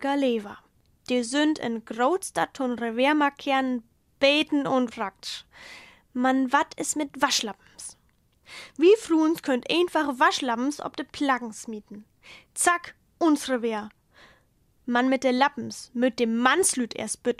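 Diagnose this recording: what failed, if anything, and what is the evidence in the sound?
Nothing failed here as far as I can hear: no stage of the chain, from wiring and converter through to storage and playback, leaves any mark on this recording.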